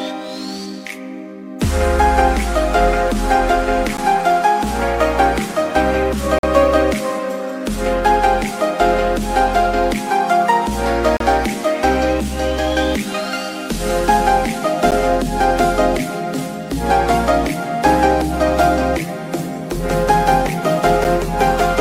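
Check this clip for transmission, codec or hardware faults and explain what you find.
The playback path likely failed to deliver samples in time at five points, leaving blocks of digital silence. Each is a hard cut to silence and back.

At 3.97 s, a block of digital silence about 11.6 ms long, which fits one missed 512-sample buffer, is heard as a sharp tick.

At 6.39 to 6.43 s, a 46 ms block fits a 2048-sample underrun. It is long enough to be heard as a brief hole.

At 11.17 to 11.20 s, a 35 ms block of digital silence is heard as a short dropout.

At 14.91 s, another gap of about 11.6 ms, consistent with a 512-sample buffer, is heard as a tick.

At 21.04 s, a 7.6 ms block is too short to register as a gap and comes across as a single click.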